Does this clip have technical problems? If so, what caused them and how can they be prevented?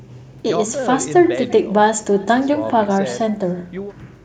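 Yes. Echo with no canceller runs through the whole speech clip: each phrase returns roughly a third of a second later as a faint, thin copy, about 25 dB below the direct sound. The far end's loudspeaker fed its microphone and nothing subtracted it, so the sound made the network round trip. A spectrogram shows each syllable's energy repeated as a weak ghost shifted right by that delay, and the waveform shows low-level tails filling the gaps. Enabling acoustic echo cancellation at the far end, or having that listener use headphones, prevents it.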